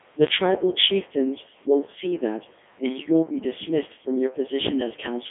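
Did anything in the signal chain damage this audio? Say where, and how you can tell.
Yes. Throughout, the speech sounds robotic and buzzy, confined to a 300 Hz to 3.4 kHz telephone band with nothing above 3.6 kHz. That points to the codec stage: a Codec 2 vocoder, likely its 3.2 kbit/s mode, rebuilding the voice from sine waves and discarding the original waveform.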